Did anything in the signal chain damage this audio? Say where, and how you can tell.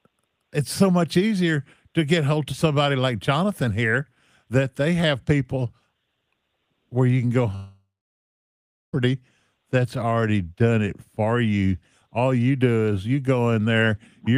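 Yes, a long network dropout likely hit the network stage: after "where you can go", 7.55 to 8.95 s decays from buzz or hiss into flat near-silence, a blank spectrogram gap, before speech resumes.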